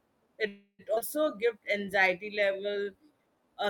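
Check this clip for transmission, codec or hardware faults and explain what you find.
The speech in this clip has three network-related faults, all in how the receiver handled late or lost packets.

From 0.47 to 0.82 s there is a call audio freeze, likely from packets held up in transit while the jitter buffer ran dry. The receiver stretched the last sound into a fading buzz or hiss for about 314 ms, ending in roughly 60 ms of silence. Unlike a skip, nothing is lost. The speech resumes exactly where it stopped.

Between 0.95 and 0.99 s comes a skip ahead. Around 200 ms of speech was discarded, with only a 17 ms join bridging the cut. This is the opposite of the freeze: there is no held sound or pause, just an abrupt forward jump with content missing.

From 1.38 to 3.47 s a jitter buffer slow-down stretches the speech to 91% speed by repeating pitch periods, adding 196 ms to rebuild the buffer reserve. 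Sounds are drawn out but the pitch stays the same, which distinguishes it from a resampling or tape-speed error.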